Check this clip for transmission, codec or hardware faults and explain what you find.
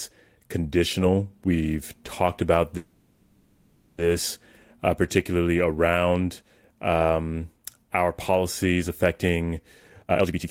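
Two transmission faults appear in this speech clip.

From 2.77 to 4.01 s there is a call audio freeze. The last sound is stretched into a fading buzz or hiss for 1.21 s, likely because delayed packets let the jitter buffer run dry. Speech then resumes where it stopped, so nothing is lost but everything after it is delayed by 1.21 s. On a spectrogram this appears as a smeared, decaying band with no new detail, and the waveform shows a shrinking envelope.

From 9.89 to 10.48 s there is a jitter buffer speed-up. The receiver trimmed repeated pitch-period slices, about 0.3 s in total, to shed the built-up delay, so speech runs at roughly 158% speed without any change in pitch and sounds hurried. The spectrogram shows compressed syllables with unchanged harmonic spacing.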